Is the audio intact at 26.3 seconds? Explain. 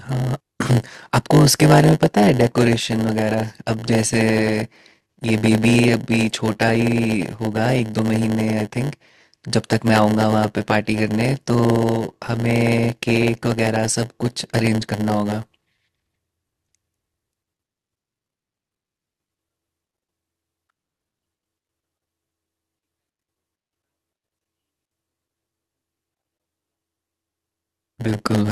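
No. A block size mismatch (padded) runs throughout. Zero-filled gaps in every block cause a 100 Hz buzz. Speech plays at 0.919 speed, near normal pitch.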